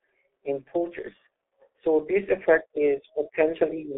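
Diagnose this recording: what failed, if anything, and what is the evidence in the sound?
The codec stage failed: the speech carries G.723.1 codec damage throughout. Nothing is present above 3.7 kHz, the band sits within a 300 Hz to 3.5 kHz telephone line, and heavy coding leaves it muffled and hoarse with smeared consonants. That fits a low-rate 30 ms frame coder near 6.3 kbit/s with a slowly updated voice model.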